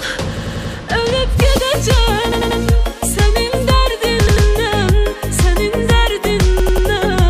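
Repeated buffer, 0.37 to 0.74 s: the playback device ran short of fresh audio and replayed its last block, a piece about 93 ms long that fits a 4096-sample buffer, four extra times. Each repeat is joined hard to the one before, so the sound stutters rhythmically, and the audio then resumes from where it left off without any gap.

Corrupt frame decoded, 1.56 to 1.58 s: damaged bits in a single compressed frame were decoded as if valid, so misread gains and codes put energy at the wrong frequencies for about 27 ms. The result is a brief, foreign-sounding chirp or blip that doesn't belong to the surrounding sound.

The same repeated buffer stutter returns at 2.32 to 2.60 s with three extra plays, at 4.27 to 4.46 s with two, and at 6.60 to 6.87 s with three. Each time the same 93 ms block is replayed with abrupt joins.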